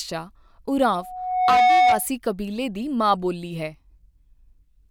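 From 0.96 s to 2.07 s a loudspeaker feedback squeal rises out of the speech. The microphone re-captures its own loudspeaker, and near 736 Hz the loop gain passes unity. The tone swells over roughly three-quarters of a second, ending around 10 dB above the speech. On a spectrogram it shows as one bright horizontal line.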